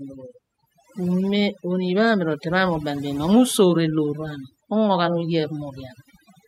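A speech recording with overdone noise removal running throughout: the background drops and breaks up into twinkling specks. Unlike a noise gate, which shuts everything between phrases, the noise reducer removes individual frequency bands near its noise estimate, taking quiet parts of the voice with them.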